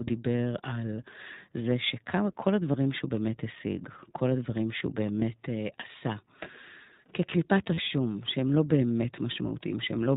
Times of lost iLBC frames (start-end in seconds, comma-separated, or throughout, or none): 2.72-2.75, 5.20-5.22, 7.74-7.80